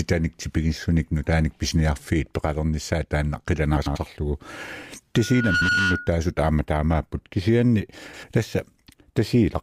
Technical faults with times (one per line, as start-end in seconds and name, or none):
3.77-3.97 frames out of order
5.16-6.22 loudspeaker feedback squeal
5.54-5.69 frames out of order
8.04-8.24 frames out of order